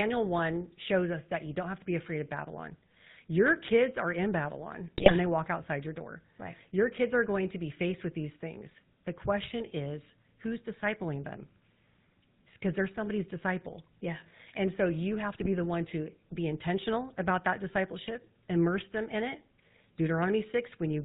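A speech recording carrying the buzzy, gravelly roughness of the GSM full-rate codec throughout, consistent with 13 kbit/s coding; a spectrogram shows nothing above 4 kHz. GSM bit errors strike at 4.98–5.12 s, before "when they walk outside", and at 15.34–15.49 s, between "so you have" and "the one", as squawks and pops, seen as smeared spectral bursts and level spikes.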